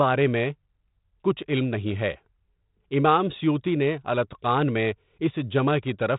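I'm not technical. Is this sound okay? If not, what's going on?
Yes, the speech carries no faults, and its narrow, telephone-like sound, with nothing above about 3.8 kHz, is just the normal character of G.726 ADPCM phone coding working as intended.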